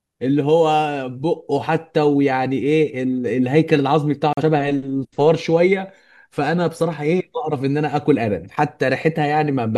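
At 4.33 s the speech cuts to silence and resumes at 4.43 s, a digital broadcast dropout. The receiver stopped getting usable data, most likely a frame that failed its checksum, and muted rather than play corrupt audio. About 43 ms of programme is simply gone, which fits the loss of a single frame. Unlike network packet-loss concealment, nothing is smeared or repeated across the gap. The sound stops cleanly as a hole and picks up later in the speech.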